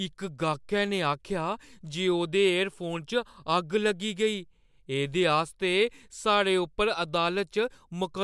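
No technical faults can be heard anywhere in the speech recording.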